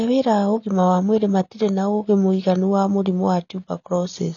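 AAC compression damage runs through the whole speech clip, from start to finish. Nothing is heard above about 6.9 kHz, so the top of the spectrum is simply missing and the sound is dull and muffled. Sustained sounds take on a warbling, smeared texture, and sibilants turn fizzy. This is likely AAC-LC coding at a low bitrate, which fits roughly 24 kbps: the encoder lowers its cut-off and quantises the remaining frequency lines coarsely, leaving gaps in the spectrum.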